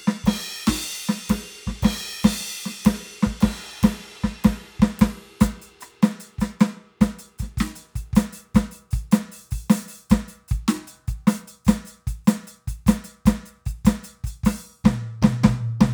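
Nothing in this music clip calls for a fault report: no event in it stands out as a technical problem.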